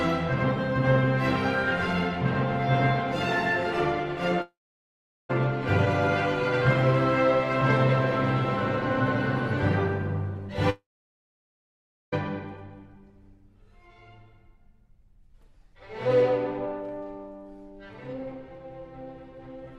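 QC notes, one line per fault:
4.41–5.31 s, long network dropout: audio likely stopped arriving for 0.88 s; the receiver briefly extended the last sound, then 0.77 s of silence before audio resumed.
10.70–12.14 s, long network dropout: another likely delivery gap lost 1.42 s; a short fading continuation gives way to 1.31 s of silence, then audio returns with that stretch missing.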